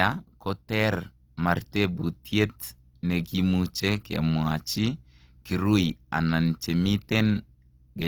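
Throughout the clip, the speech appears to have passed through Opus compression, likely in its music-oriented CELT mode at a low rate that fits roughly 24 kbps. With too few bits, the encoder keeps each band's energy but fills the fine detail with folded copies of lower bands or with noise. The speech sounds plainly grainy and rough, with a noisy texture rather than swirling, while the bandwidth stays full, reaching about 20.2 kHz.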